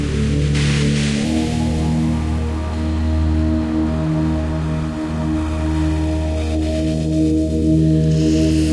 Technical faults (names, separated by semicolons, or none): wrong sample rate